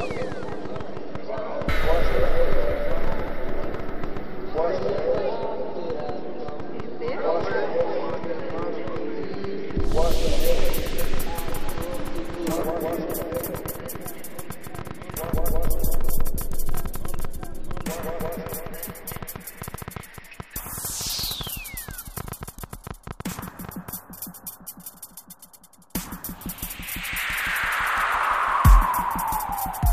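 From 0.01 to 23.90 s, a train of clicks ticks unevenly at 8.8 per second, peaking slightly above the sound, likely from nearby electrical interference.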